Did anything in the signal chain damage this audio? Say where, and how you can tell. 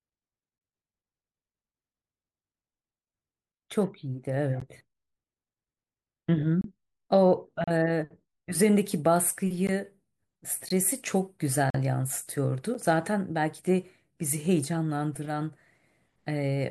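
Yes: gaps between stream segments at playback. Timestamps of consecutive 1-second segments fail to meet, so silence fills the hole. Hard-edged dropouts of 8 to 42 ms, spaced near whole seconds, hit 4.60, 6.61–6.64, 7.64–7.68, 9.67, 10.69, 11.70–11.74 and 12.74 s. No speech is lost, only delayed.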